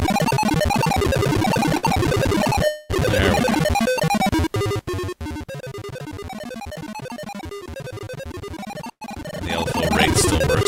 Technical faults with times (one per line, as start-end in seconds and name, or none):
1.77-1.85 burst of packet loss
2.65-2.91 long network dropout
3.89-3.99 burst of packet loss
8.91-9.03 burst of packet loss